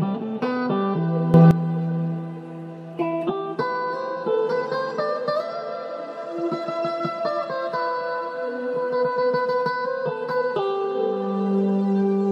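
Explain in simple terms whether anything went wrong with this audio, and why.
At 1.34 s there is a sudden gain jump: the sound and its background hiss leap louder together until 1.51 s, likely from a volume change applied instantly rather than smoothly.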